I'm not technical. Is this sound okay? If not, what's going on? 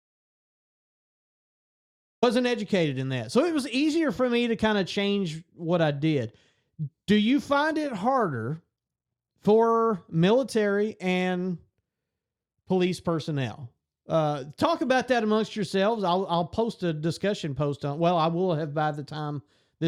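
No. Audio dropout to silence from the very start until 2.23 s: the input was likely cut off, so the recording holds dead, total silence, and the sound comes back in mid-flow.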